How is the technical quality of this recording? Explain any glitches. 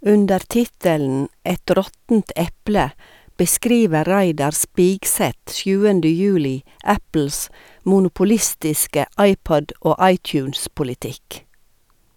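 The technical quality of this recording holds up, with no glitches to explain.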